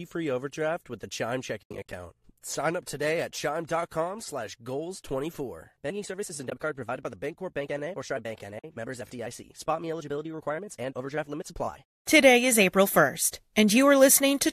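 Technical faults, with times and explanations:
1.63–1.93 s, AAC frame loss with muting: a cluster of short dropouts over about 0.3 s removes about 180 ms of sound, and the longest gap runs near 70 ms. The decoder zeroes each lost frame's spectrum, and the overlapping windows fade the edges. The holes are soft-edged, unlike a hard digital cut.
6.50–6.52 s, AAC frame loss with muting: a brief 20 ms hole falls between "services and" and "card provided by the". This fits two frames of about 10 ms, likely from low-delay AAC coding. It fades out and back in, and nothing is repeated or smeared, which sets it apart from concealment that fills gaps.
8.59–8.64 s, AAC frame loss with muting: a 50 ms gap where several consecutive frames were silenced. The window overlap ramps the level down and up, so the hole has soft shoulders instead of the abrupt edge and click of a sample-level dropout.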